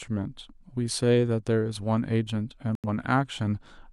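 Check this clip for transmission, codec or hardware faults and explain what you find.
One fault stands out: a digital broadcast dropout from 2.75 to 2.88 s. The receiver stopped getting decodable frames, most likely through signal loss or frames failing their error check, so it muted rather than play corrupt data. The speech cuts to silence for that stretch, then resumes further along. About 85 ms of the programme is simply missing, which fits a couple of lost frames, so the speech skips forward instead of pausing and picking up where it left off.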